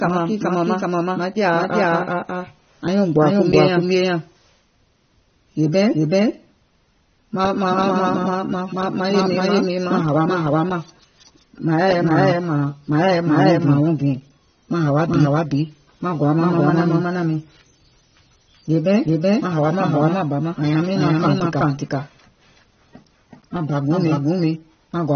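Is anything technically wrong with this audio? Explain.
Yes, two faults run through the whole speech clip.

Throughout, every sound repeats about as loud as the original, around 400 ms later, with no room decay. This is likely a doubled audio track, with a second copy captured out of step.

Throughout, the speech sounds dull, smeared and fizzy, with nothing above 6.3 kHz. This is likely AAC compression, and the damage fits a low AAC-LC bitrate around 24 kbps.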